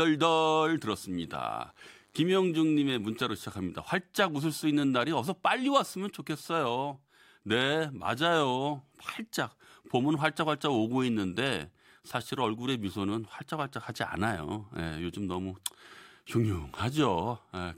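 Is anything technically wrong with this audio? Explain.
Yes. From 0.57 s to 3.67 s the speech carries a DECT cordless phone buzz. A nearby DECT handset or base station transmits a brief radio burst every 10 ms. The audio circuitry rectifies those bursts, so they turn into sound at 100 Hz. The result is a steady, thin, harmonic-rich buzz under the speech. It sits well below the speech, roughly 40 dB down.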